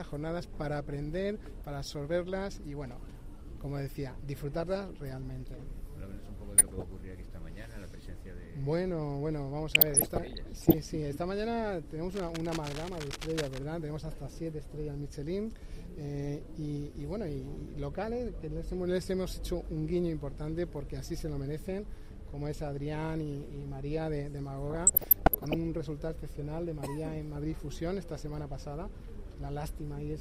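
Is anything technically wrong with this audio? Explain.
Yes, there are two faults. DAB burbling at 6.58–6.83 s, 9.75–10.74 s and 24.70–25.54 s: residual bit errors from weak reception corrupt MP2 sub-band data, producing short noise blips in single sub-bands over the sound. Cable scratch noise at 12.11–13.59 s: dense, uneven rustling roughly 10 dB below the signal, likely from a worn cable or connector being moved.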